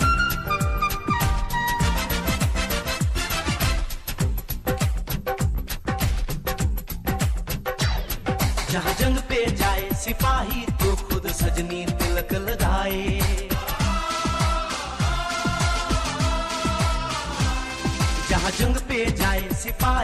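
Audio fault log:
Nothing stood out on listening to this audio.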